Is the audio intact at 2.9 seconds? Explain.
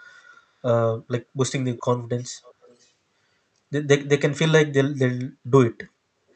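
No. An echo leak runs from 2.43 to 2.9 seconds, just ending at that point. A faint, delayed copy of the speech sits about 0.39 s behind it, far quieter than the main voice. Its likely cause is a far-end echo canceller letting loudspeaker sound back into the call.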